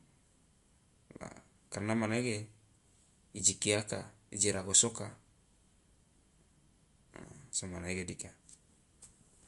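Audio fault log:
Throughout, MP3 compression: the treble stops dead at 11.3 kHz, and the speech sounds plainly watery and swirly, with chirpy, metallic s sounds and softened consonant attacks. This is likely a starved MP3 encoder, at a rate that fits roughly 50 kbps, cutting the highest band and dropping weak frequency lines frame by frame. On a spectrogram there is a flat ceiling at 11.3 kHz, with flickering holes and blocky patches below it.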